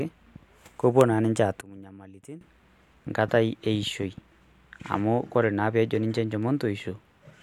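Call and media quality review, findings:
Train of clicks, 0.00 to 5.00 s: roughly twenty irregular ticks, about 3.4 per second, peaking near speech level and audible in pauses too. Likely cause is interference from nearby equipment or a faulty connection or power supply. Waveform shows narrow isolated spikes, and the spectrogram shows thin full-height vertical lines at uneven spacing.

One channel inverted, 1.61 to 2.41 s: the mono sum drops about 18 dB, leaving a faint residue of the mismatch between the channels. The likely cause is reversed polarity on one leg of the stereo path. In the waveform, the summed trace collapses. The spectrogram shows a dark band.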